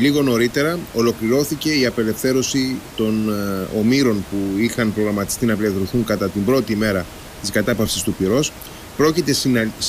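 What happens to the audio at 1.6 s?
Nothing goes wrong at 1.6 s: the speech is intact there, with only the room's own background noise sitting about 18 dB below it.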